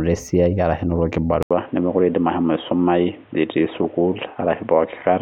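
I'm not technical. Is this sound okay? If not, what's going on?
No. At 1.43 s the speech drops out for a brief 80 ms gap, then returns duller and boxier through to the end, with nothing above 3.8 kHz and a faint new background noise. That points to an input switched to a poorer device, likely another microphone or a headset's call profile.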